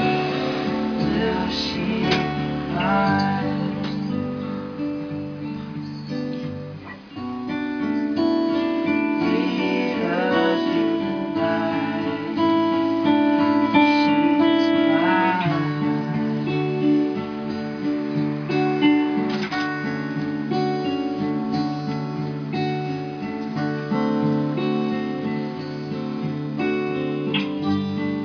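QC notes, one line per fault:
No faults found on this pass.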